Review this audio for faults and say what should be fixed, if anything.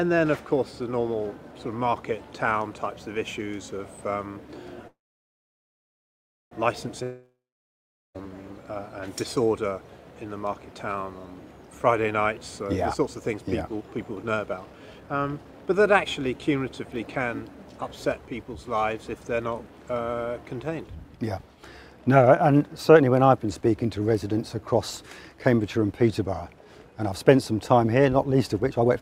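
From 4.87 to 6.53 s there is a call audio freeze: a fading buzz, then about 1.6 s of silence, and the sound resumes exactly where it stopped. Delayed packets likely emptied the jitter buffer. Unlike a dropout, nothing is lost. A larger adaptive jitter buffer with better network prioritisation would prevent it.

From 7.03 to 8.3 s there is a long network dropout: a brief fading tail, then about 0.8 s of silence. The sound returns further on, with about 1.1 s skipped, which likely points to lost packets. A more reliable link or added redundancy and forward error correction would prevent it.

The jitter buffer speed-up occurs three times. From 12.65 to 16.06 s and from 20.88 to 21.63 s the sound plays at 110% speed. From 28.72 to 29.01 s it plays at 158%. Pitch stays the same throughout, because short pitch periods are cut, removing roughly 0.4 s in the first stretch. Steadier packet delivery would avoid the buffer build-up that triggers it.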